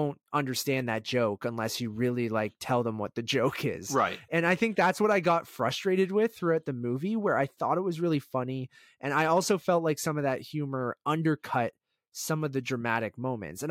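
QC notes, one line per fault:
No technical faults are audible in the speech recording; the signal holds steady with no interruptions or disturbances anywhere in it.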